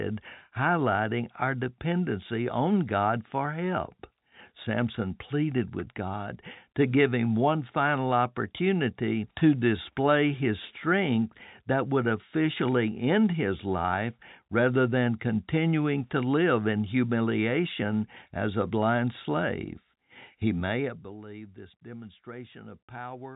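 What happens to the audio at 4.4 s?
Nothing goes wrong at 4.4 s: the audio is intact there, carrying the narrow, telephone-band character of G.711 coding without any break, dropout or sudden level jump.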